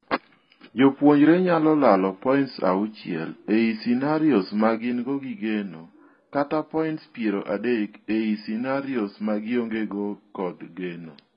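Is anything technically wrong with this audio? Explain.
Yes, two things. Throughout, it sounds like AAC compression, likely at a very low bitrate near 16 kbps: nothing above 5 kHz, and heavy smeary, warbly damage. At 4.78 s, right after "auchiel ei scenarios ma", there's a sudden gain jump. The level, background included, drops about 6 dB and stays down, likely from an unramped digital gain change.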